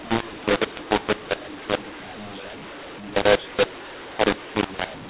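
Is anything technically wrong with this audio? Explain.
Yes. Throughout, mu-law and A-law are mixed up: the A-law telephone audio is decoded as mu-law, scrambling levels and filling pauses with noise, visible as raised broadband floor and jagged waveform. The 4 kHz telephone band from the G.711 coding remains.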